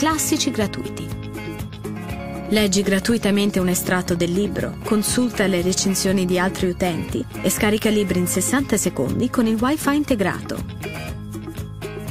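From 2.46 to 5.13 s a train of clicks ticks over the sound at a regular 10.5 per second, about thirty in all, each peaking roughly as loud as the sound itself. Likely interference or a faulty connection. Spectrograms show evenly spaced thin vertical lines; waveforms, sharp identical spikes.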